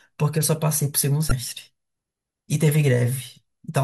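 At 1.28 to 1.32 s a brief glitch cuts across the speech. This is damaged data in a compressed stream: corrupted bytes there made the decoder misread its frames, lose sync and skip forward to the next valid frame header.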